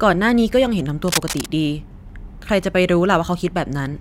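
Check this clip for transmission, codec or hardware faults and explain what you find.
One hardware fault is present in this speech clip. Cable scratch noise runs from 1.08 to 1.51 s. It is likely caused by a worn cable, connector or control being moved, so that its contact resistance jumps about rapidly and injects ragged bursts of noise into the line. For almost half a second, a dense, uneven scratching and rustling sits over the speech, only a few decibels below it and loud enough to compete with the voice.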